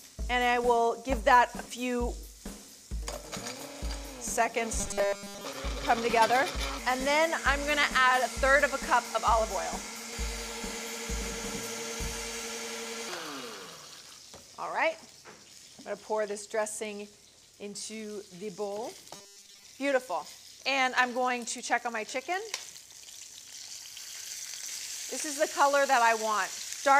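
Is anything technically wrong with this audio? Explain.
Yes. From 4.79 to 5.45 s and 19.15 to 19.64 s, the sound turns into a rigid 200 Hz robotic buzz. The likely cause is repeated short buffers, about 5 ms each, covering roughly 70 percent of those stretches.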